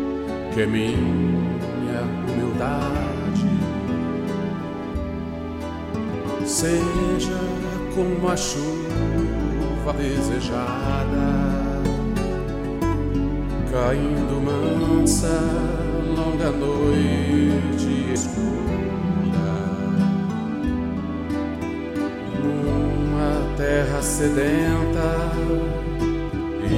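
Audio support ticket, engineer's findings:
Joins at 9.90–9.92 s and 18.16 s where the audio jumps ahead, roughly 100 ms and 150 ms lost. Compressed frames skipped in the decoder path: missing or rejected frames, several at each point.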